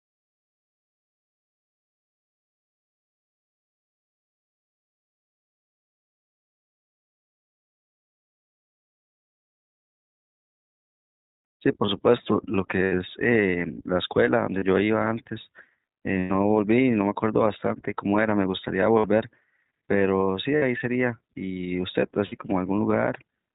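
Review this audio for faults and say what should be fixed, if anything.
The whole recording has gone through the iLBC codec, and you can hear it plainly. Nothing comes through above 4 kHz, so the speech sounds narrowband and a bit rough and synthetic. That's what you get when each frame's excitation is coded on its own at a low rate. The roughness fits the 15.2 kbps mode with 20 ms frames. To prevent it, send the audio through a wideband codec such as Opus instead of iLBC.

There are also lost iLBC frames, six dropouts in all: 12.84–12.93 s (80 ms), 14.58–14.63 s (40 ms), 16.18–16.32 s (120 ms), 18.98–19.06 s (60 ms), 20.56–20.63 s (60 ms) and 22.26–22.34 s (60 ms). In each gap the decoder keeps repeating the last pitch cycle with noise mixed in, so you get a short held, buzzy vowel. Because iLBC frames don't depend on each other, the speech snaps back as soon as each gap ends. To prevent it, fix the packet loss on the network path, or add a jitter buffer or forward error correction.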